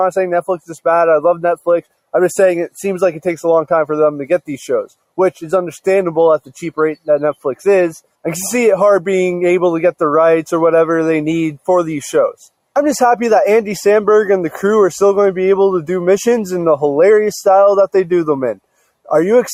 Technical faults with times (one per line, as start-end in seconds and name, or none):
1.57-1.92 sound cut by the noise suppressor
18.55-19.10 sound cut by the noise suppressor